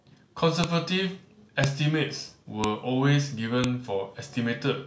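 At 0.64, 1.64, 2.64 and 3.64 s, sharp, loud clicks cut through the speech at exact one-second spacing. This is file header played as audio: 1-second WAV pieces were joined with their headers intact, so those header bytes reproduce as brief snaps.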